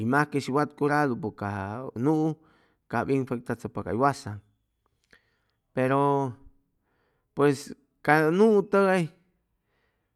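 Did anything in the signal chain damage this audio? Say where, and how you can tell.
No, nothing in the signal chain has damaged this speech recording. No stage, from capture through to playback, leaves any audible mark on the sound.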